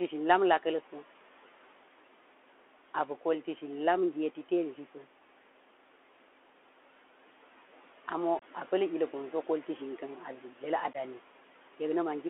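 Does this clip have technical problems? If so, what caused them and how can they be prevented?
Yes. The Bluetooth CVSD headset codec affects the whole clip. The sound is confined to a 300 Hz to 3.4 kHz telephone band, which fits a 64 kbps CVSD link. That link encodes one bit per sample and adapts its step size, so loud high-frequency sounds distort and a granular hiss sits beneath the speech. To prevent this, switch the headset to a wideband profile such as mSBC or LC3, or record on a wired microphone.

Unconcealed Bluetooth headset packet loss appears twice. From 8.39 to 8.43 s, a 26 ms hole replaces several lost packets. From 10.93 to 10.96 s, an 11 ms hole replaces a few lost packets. Each hole has abrupt edges, and the speech resumes briefly quieter as the CVSD decoder recovers. To prevent this, keep the headset close to the phone, away from Wi-Fi and other 2.4 GHz interference.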